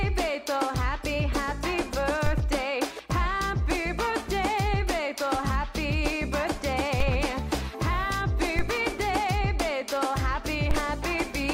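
A DC step occurs at 2.26 s, 7.00 s, 8.59 s and 10.71 s. Each time, the waveform's zero line jumps suddenly, by about -17 dBFS for the first two and about -16 dBFS for the last two. The offset does not hold. It drains away as if through a 5 Hz high-pass, fading within a few tens of milliseconds. Each jump is heard as a low thump or click. The sound itself carries on unchanged underneath.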